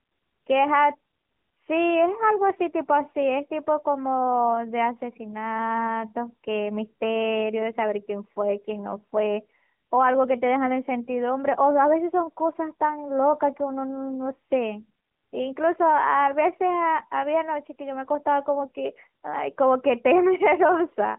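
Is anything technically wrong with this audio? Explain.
Yes. Throughout, the speech carries AMR narrowband mobile codec damage: an 8 kHz vocal-tract model leaves nothing above 3.8 kHz, sounding buzzy and synthetic, consistent with a mid-rate mode around 10.2 kbps. A spectrogram shows a flat ceiling near 3.8 kHz.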